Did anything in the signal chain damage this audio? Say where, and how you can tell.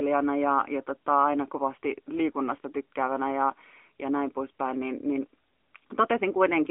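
Yes. The damage comes from the codec stage and runs through the whole speech clip: this is the AMR narrowband mobile codec, AMR-NB. The band is confined to a telephone line of roughly 250 Hz to 3.4 kHz, with nothing reaching 4 kHz, because the codec works at 8 kHz sampling. Its damage is plainly audible as a synthetic, modelled quality, since the codec rebuilds each 5 ms from a vocal tract model and a few pulses. This fits the 10.2 kbps mode.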